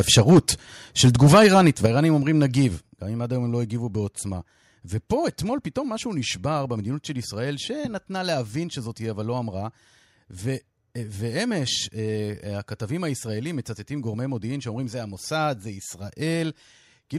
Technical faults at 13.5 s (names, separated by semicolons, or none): none